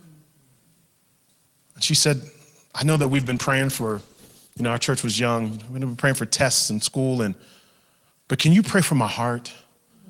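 From 2.93 to 5.77 s, a call bitrate drop starves the Opus encoder, consistent with 32 falling to 13 kbps. Speech turns coarse, rough, watery or muffled, losing its highs, then clears.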